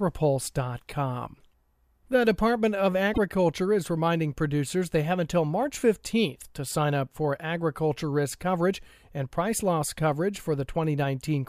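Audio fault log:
3.12–3.18 s, broken MP3 bit reservoir: frames were likely dropped, so following frames decode borrowed bits from the wrong data, leaving a 58 ms garbled blip where the speech jumps ahead.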